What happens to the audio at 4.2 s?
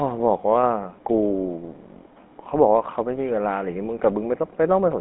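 At 4.2 s the speech carries GSM full-rate codec damage, present throughout: pulse-driven vocal-tract coding, consistent with 13 kbps, leaves buzzy, gravelly speech with nothing above 3.8 kHz.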